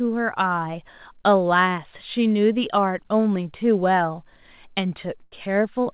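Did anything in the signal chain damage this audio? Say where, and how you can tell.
Yes. A burst of packet loss at the network stage damages the speech from 5.24 to 5.34 s. For about 78 ms the last sound is stretched and fades as the receiver conceals the gap, then the speech resumes further on with roughly 80 ms skipped. A buffer underrun would instead give a hard silence or click with nothing lost. The call path's G.711 band limit, with nothing above 4 kHz, is part of the connection and not this fault.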